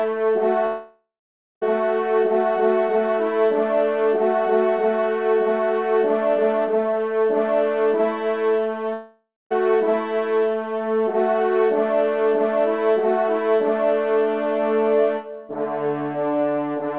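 The audio is band-limited to 4 kHz, which fits a G.711 mu-law call path at 64 kbps. Gaps at 0.66 to 1.63 s and 8.93 to 9.52 s fade into a buzz or hiss, then silence. Each is likely a long network dropout.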